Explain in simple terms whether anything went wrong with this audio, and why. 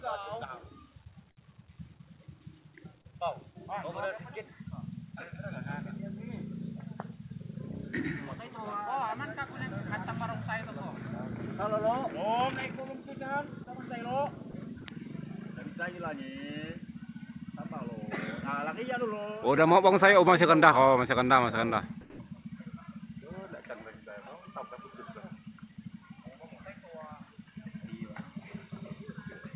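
Brief gaps at 13.64, 14.51 and 14.81 s, plus a longer one from 22.01 to 22.19 s, are likely sound dropped by the voice detector: steady noise or near silence fills in.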